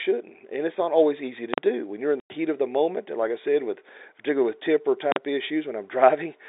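At 1.54 s, right after "not always easy to", there's an invalid-numbers-at-full-scale fault. A calculation blew up into infinite or invalid values that got pinned to maximum level for about 43 ms, which fits a 2048-sample block, so it lands as one brutal bang. The same thing happens again at 5.12 s, just after "with particularly with temper".

Between those, from 2.20 to 2.30 s, following "do when you're in" and before "of the moment", there's packet loss filled with silence. A 100 ms hole, consistent with five 20 ms packets going missing, drops out hard with sharp edges on the telephone-band sound.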